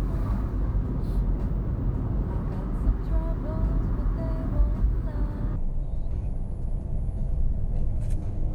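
From 5.56 s to the end, a section plays at the wrong speed: the sound runs at 0.535 times its proper rate, dropping about ten semitones and sounding deep and dragged. The likely cause is that segment being played or resampled against the wrong clock. On a spectrogram, everything after 5.56 s shifts down in frequency and stretches sideways, and on the waveform the transients and envelopes spread out almost twofold.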